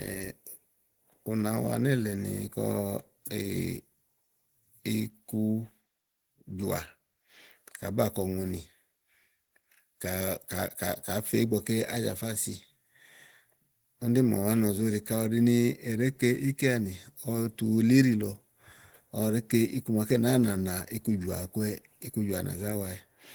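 Opus voice compression runs throughout the speech. The coder appears to be in hybrid mode: linear prediction handles the band below 8 kHz and a transform layer codes the content above it, with nothing above 20.2 kHz. The excitation is quantised coarsely, which fits a bitrate of around 16 kbps in 20 ms frames. The damage is plainly audible: the voice sounds hoarse and slightly robotic.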